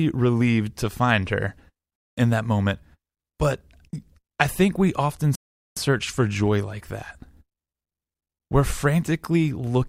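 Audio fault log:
5.35–5.77 s, rebuffering stall: after "I think we often" the speech stops dead for 0.41 s. Playback ran dry, then resumed intact at "search for joy like".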